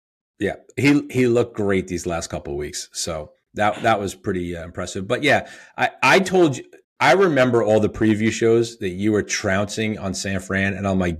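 Nothing stood out on listening to this speech recording as a technical problem.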